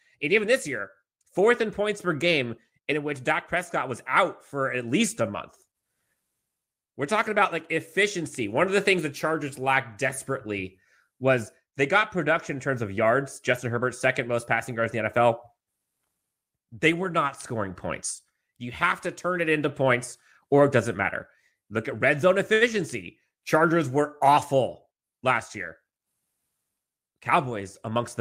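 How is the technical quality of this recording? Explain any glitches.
Two brief network-timing glitches show up near the end of the speech.

At 22.53 to 22.63 s, just after "at red zone", there is a short stall from a late packet. The jitter buffer ran dry, so the receiver stretched the last sound for 78 ms until the data arrived. Nothing is skipped, which sets it apart from a dropout. You hear a held sound with a slight buzz or dip, and the delay grows by 78 ms.

From 24.59 to 25.26 s there is a jitter buffer speed-up. The buffer was holding surplus audio, so the receiver trimmed short pitch-period slices, about 50 ms in total, and the speech runs at 106% speed. Unlike a resampling error, the pitch stays the same, so the speech just sounds slightly hurried.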